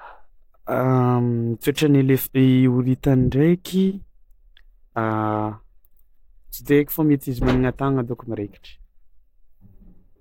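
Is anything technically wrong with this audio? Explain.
Yes. At 1.61 s there is pre-echo: the codec's block-wide quantisation noise smears about 18 ms of hiss ahead of a sharp speech onset, showing as a broadband smudge before the transient.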